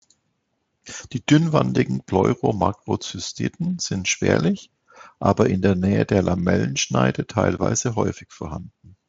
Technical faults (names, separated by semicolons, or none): none